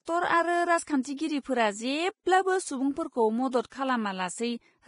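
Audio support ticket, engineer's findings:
Speech throughout: hissy, grainy treble, nothing above 10.5 kHz, likely Vorbis compression at a low rate near 28 kbps. Residue noise tracks the signal, unlike a steady noise floor.

Pre-echo at 0.83–0.87, 1.02–1.05, 1.17, 3.51–3.53 and 3.70–3.72 s: hiss 17–43 ms ahead of attacks from block-spread quantisation noise, before the onset rather than after like reverb.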